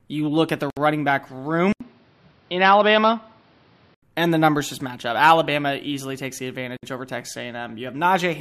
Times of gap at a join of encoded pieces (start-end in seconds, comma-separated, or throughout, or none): 0.70-0.77, 6.77-6.83